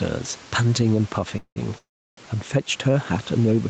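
Gain pumping runs through the whole clip: the level swings by about 5 dB as the gain is pulled down under each loud stretch of speech. This is likely from input gain set too high, with a fast limiter reacting to every peak.

Call audio freezes occur from 1.37 to 1.58 s and from 1.78 to 2.19 s. The first lasts about 0.19 s, with a fading buzz or hiss ending in roughly 80 ms of silence. The second lasts about 0.39 s, mostly silent for about 0.34 s. Both are likely a jitter buffer running dry while packets were delayed. The speech then resumes intact, pushed later rather than cut.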